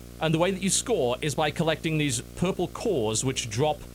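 Video or display buzz runs from start to finish under the speech: a screen or video cable is coupling into the audio path, leaving a buzz at the 60 Hz field rate with hash above it, sitting roughly 20 dB below the speech.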